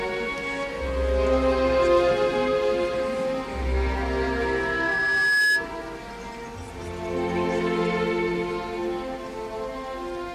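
From 3.74 s to 5.72 s a loudspeaker feedback squeal rises out of the audio: a microphone is hearing the loudspeaker it drives, and at 1.7 kHz the loop gain tops one, so that frequency feeds on itself. It swells over roughly one and a half seconds to about 5 dB above the surrounding sound. A spectrogram shows a single bright horizontal line at 1.7 kHz, thickening as it grows. The waveform shows a steadily widening envelope.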